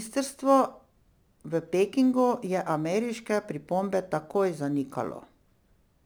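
From start to finish, the speech went through a crude rate conversion: it was resampled by a small ratio, which fits 48 kHz to 44.1 kHz, by simply keeping the nearest sample and dropping the rest, with no filtering. The dropped samples fall in a repeating pattern set by the two rates, leaving shifted, inharmonic copies of the speech, roughly 30 dB below it. The result is a gritty, inharmonic fizz that rides on the louder and brighter parts of the speech.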